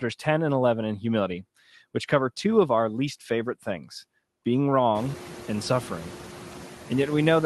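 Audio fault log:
Throughout, noise suppressor artifacts: the suppressor pulls down bands it judges to be steady noise, frame by frame, by about 5 dB, so the room noise dips between phrases and comes back up under the speech. It gets more exposed once the room noise rises by about 22 dB near 5 s and sits about 17 dB under the speech, while the call path's top end stops around 12 kHz.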